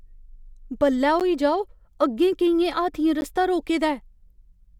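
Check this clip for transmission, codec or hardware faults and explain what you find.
The speech was delivered in 2-second chunks, and each join left a gap between chunks: the player or the codec's padding inserted about 12 ms of silence before the next chunk began. No audio is lost; it is pushed later. The clip has two such holes, at 1.20 s, just before "जाओ अग्गें केइयें हाथियें", and at 3.21 s, between "जाओ अग्गें केइयें हाथियें" and "रस्ता रोके". Each is heard as a brief, hard-edged dropout that briefly interrupts the speech.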